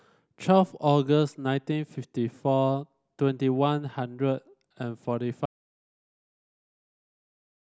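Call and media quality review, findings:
Audio dropout to silence at 5.46 s, lasting to the end of the clip. Speech cuts off mid-flow into about 2.2 s of silence, with no room tone. Likely input loss upstream: disconnected device, failed link or mute, with encoder still writing silence.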